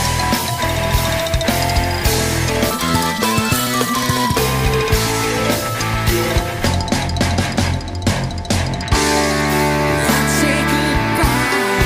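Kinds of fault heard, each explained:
Section at the wrong speed: From 2.71 s to 4.38 s the audio runs at twice its recorded speed, so timing and pitch shift together. Events come hurried and compressed, and the whole section jumps up by around ten semitones before dropping back to normal at 4.38 s. The abrupt switch in and out points to a segment that was most likely resampled or played against the wrong clock during editing or playback.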